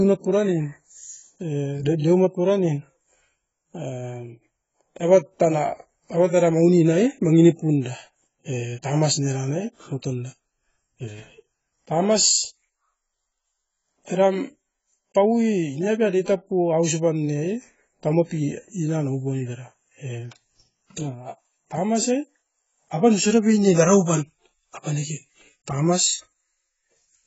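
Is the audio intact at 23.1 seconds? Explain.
No. At 23.1 seconds the speech sits inside AAC compression damage that runs through the whole clip. The likely cause is an AAC-LC encoder starved of bits, heavy enough to point to a rate around 16 kbps, so it throws away spectral detail it cannot afford to code. The sound has nothing above 7.7 kHz, which leaves it dull, while the thinned spectrum gives sibilants and held vowels a smeared, warbling, fizzy texture.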